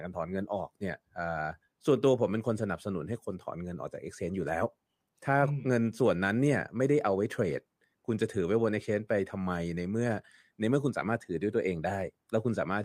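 Nothing in this speech recording stands out as a technical fault, so there's nothing to flag here.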